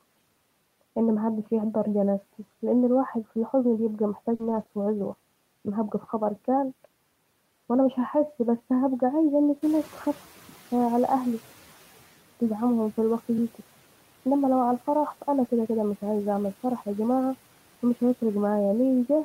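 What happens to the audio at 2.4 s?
Nothing goes wrong at 2.4 s; the speech there is intact, with no dropout, glitch or distortion.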